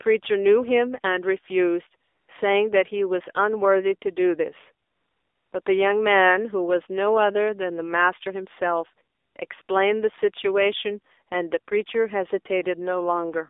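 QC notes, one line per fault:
Throughout: AMR narrowband mobile codec. The speech has been squeezed through AMR-NB at 7.4 kbps, which models the vocal tract and drives it with a few pulses per 5 ms subframe. At this low rate the damage is plainly audible: the voice turns buzzy and synthetic. The line band runs from roughly 300 Hz to 3.6 kHz, so the sound is thin, with no low body and no air above it.
2.04 to 2.28 s, 4.86 to 5.52 s, 5.62 to 5.66 s, 9.16 to 9.36 s, 9.48 s, 9.62 to 9.68 s: AMR comfort noise. The sending side decided the talker was silent and stopped sending speech frames. The gaps last 240 ms, 660 ms, 40 ms, 200 ms, 20 ms and 60 ms. During each one the receiver filled in smooth synthetic noise built from a coarse level and spectrum estimate. The result is a flat hiss that switches in and out.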